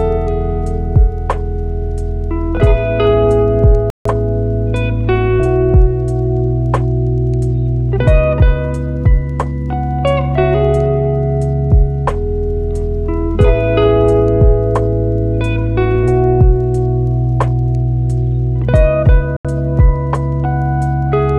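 At 3.90 s the audio drops to silence for about 150 ms, resuming at 4.06 s; a second, shorter dropout of about 80 ms runs from 19.37 s to 19.45 s. Both gaps are clean cuts to silence with an abrupt restart. The likely cause is a Bluetooth stall: radio interference delayed packets, the receiver's buffer emptied, and playback halted until retransmitted data arrived and the stream could continue.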